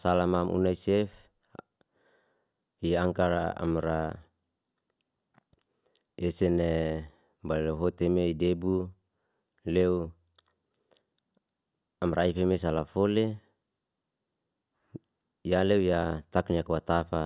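A spoken recording with nothing technically wrong to point to anywhere along the way, so there's no fault here to time or trace to a cause.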